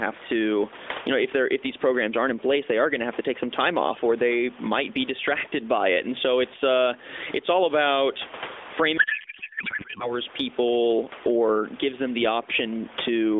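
Speech over a narrowband mobile line (roughly 300 Hz to 3.6 kHz, consistent with AMR at 12.2 kbps) has level that swells and ducks by around 15 dB around louder sounds throughout, with loud and soft passages squashed together. This is gain pumping, likely from input gain set too high with a fast limiter or compressor clamping down. From 8.98 to 10.19 s the speech turns into garbled noise and warble that barely tracks it. This is a codec payload misread: octet-aligned AMR frames were decoded as bandwidth-efficient, so every field landed in the wrong place.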